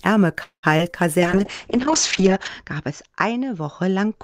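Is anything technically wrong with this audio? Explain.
Yes, there are three kinds of fault in this speech.

From 0.43 to 0.65 s there is a call audio freeze. The sound is stretched into a fading buzz that dies to silence for about 0.1 s, then the speech resumes exactly where it left off. Nothing is lost, but roughly 0.2 s of extra delay is inserted. The likely cause is packets stalling in transit, so the jitter buffer ran dry and the receiver filled the wait with fading continuation.

At 0.77 to 0.81 s and again at 0.91 to 0.95 s there is short concealed packet loss. Each is a brief smear or wobble, where the speech seems to blur for an instant and then blend back. About 20 ms of real audio never arrived each time. The decoder patched each hole by extending the preceding sound and crossfading back into the genuine signal.

From 1.21 s to the end there is a call bitrate drop. The speech turns rough and watery and loses its top end, with nothing above 8 kHz where before it reached 20 kHz. 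This fits the encoder being pushed from around 32 kbps down to around 7 kbps after the call's bandwidth estimate collapsed. It stayed at that lowest rate for about 1.3 s.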